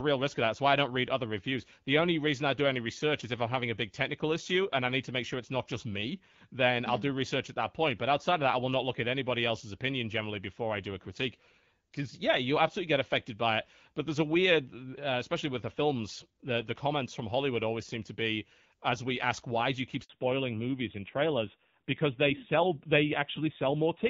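A handover gap at 20.04 to 20.10 s, right after "why do you keep": no frames arrived while the call switched networks, leaving 60 ms of silence.

Fallback to narrowband from 20.1 s to the end: the call left the wideband codec, so nothing above 4 kHz remains and speech sounds duller and rougher, which fits AMR-NB at 7.4 kbit/s.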